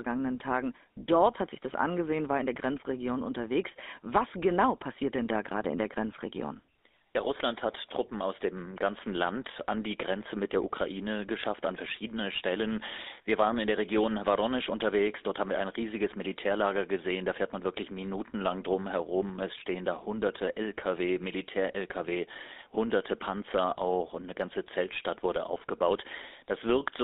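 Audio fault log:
Throughout: GSM full-rate codec. Pulse-driven vocal-tract modelling gives the speech a buzzy, gravelly roughness, fitting a 13 kbps full-rate coder, with the band held to roughly 250 Hz to 3.7 kHz.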